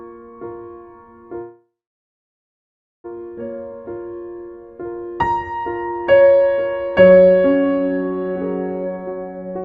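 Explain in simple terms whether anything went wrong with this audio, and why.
At 1.41 s the music stalls until 3.06 s, a call audio freeze, likely from delayed packets. A brief fading buzz becomes about 1.3 s of silence, then the music resumes exactly where it stopped.

From 8.85 s to the end, a jitter buffer speed-up plays the music at 190% speed, trimming roughly 0.7 s, so the tempo rushes while the pitch stays unchanged.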